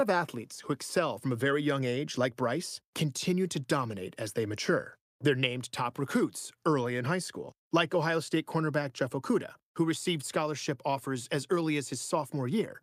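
Nothing in this speech recording stood out as a technical fault on listening.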